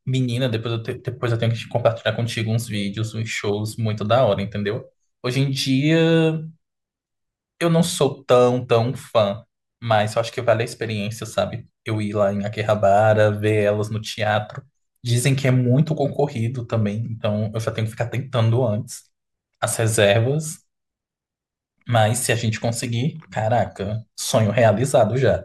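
Right through the clip there's sample clock jitter. The converter's clock wobbles, by something like a couple of microseconds, so each sample gets grabbed a touch early or late, and the faster the waveform is moving the bigger the error. On this speech it shows up as a fine hiss or grittiness riding on the louder, brighter sounds, sitting roughly 35 dB under the signal, and it drops away entirely in the pauses.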